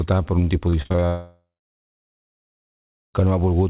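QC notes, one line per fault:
0.70–1.04 s repeated packet loss (robotic sound): six short holes, longest 35 ms, patched by repeated sound, which makes it choppy. On the spectrogram, these show as smeared, stuttering frames.
1.06–3.16 s long network dropout: about 2.1 s is lost, likely to a network outage. A brief fading buzz or hiss gives way to 1.7 s of flat, blank silence.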